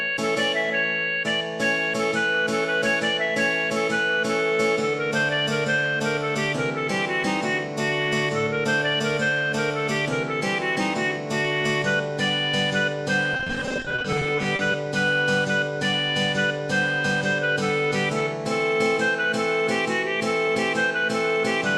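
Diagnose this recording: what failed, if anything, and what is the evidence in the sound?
Repeated packet loss (robotic sound) from 13.33 to 14.74 s: a network fault. Many short gaps, none over 30 ms, are patched by extending prior audio. About a third of the span is concealed, giving choppy sound with pieces missing.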